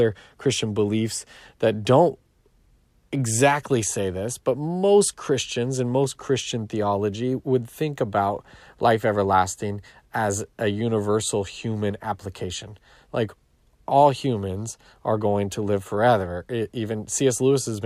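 Nothing stood out as a technical fault when listening to this speech recording.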